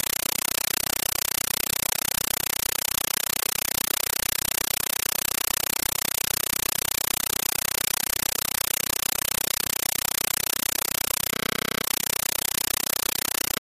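From the very start and all the way through, there's no real sound at all, just harsh, very loud static that chatters at about 31 bursts a second. That's a compressed stream played as audio: the data packets got treated as plain samples instead of being decoded. Each burst is roughly 8 ms of noise-like data, then silence from the zero padding until the next one, which fits a 384 kbps AC-3 stream.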